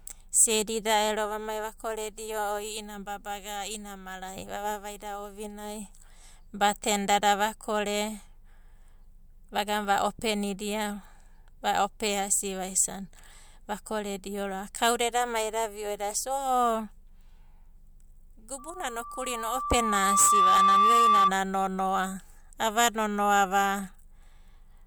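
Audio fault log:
18.58–21.35 s, loudspeaker feedback squeal. A steady tone near 1.2 kHz rises out of the speech and swells over roughly two seconds. It peaks at about 10 dB above the speech, then stops at 21.35 s. The microphone is hearing the loudspeaker it drives. At 1.2 kHz the loop returns more than it receives, so each pass makes the tone louder. Only that one frequency runs away, which is why a single pitch dominates.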